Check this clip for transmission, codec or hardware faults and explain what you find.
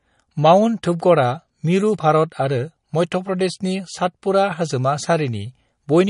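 One codec fault runs through the whole clip, most likely MP3 compression. Nothing is heard above 10.6 kHz, and weak spectral detail drops in and out between frames, so the speech sounds watery and swirly, which fits a low bitrate around 40 kbps. A plain low-pass filter would remove the treble just as cleanly, but it would not make this texture shift from moment to moment.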